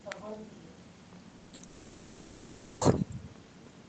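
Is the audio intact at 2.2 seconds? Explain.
No. At 2.2 seconds you're in the middle of what sounds like a long network dropout, running from about 1.67 to 2.83 s. The audio likely stopped arriving and the receiver filled all of that roughly 1.1-second gap by stretching the last sound into a buzzy hiss that fades. Real audio returns around 2.83 s, with the stretch in between simply gone.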